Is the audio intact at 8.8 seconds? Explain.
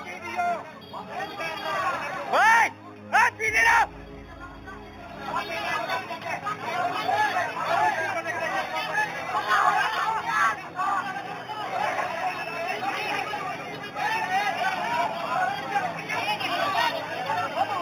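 No. Throughout the clip, including at 8.8 s, the top end is dulled with a faint metallic shimmer. This is imaging from linear upsampling. The 8 kHz audio was raised to 44.1 kHz by straight-line interpolation, which left a mirrored image from 4 kHz to 8 kHz, roughly 20 dB down.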